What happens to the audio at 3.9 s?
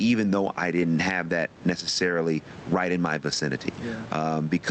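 At 3.9 s you're hearing gain pumping, which runs through the whole clip: the room background swells in the gaps and ducks by roughly 15 dB under each loud bit, likely from fast limiting on too much input gain.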